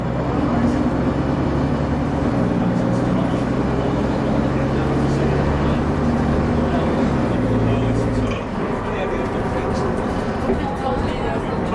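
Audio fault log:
No faults can be heard anywhere in this clip. Nothing in the sound points to a dropout, glitch or distortion at any moment.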